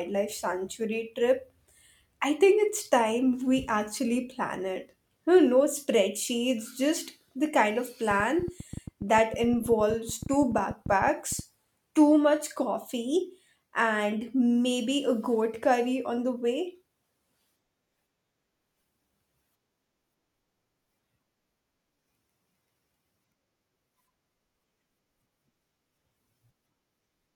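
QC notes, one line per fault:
8.11–11.40 s, train of clicks: after "the kind of", unevenly spaced ticking at about ten per second, some peaking above the speech, until "too much"; likely interference pulses.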